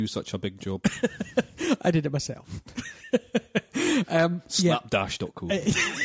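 No technical faults are audible.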